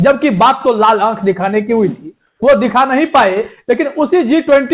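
A narrowband call recording, with nothing above 4 kHz as expected from a telephone-grade codec path, has one fault: comfort noise in place of the background from 2.27 to 2.42 s. For those 150 ms the quiet background, sitting about 57 dB below the loudest passages, turns into a smooth, featureless hiss and shifts in level by about 2 dB. The likely cause is discontinuous transmission, where the receiver filled a gap with synthetic noise.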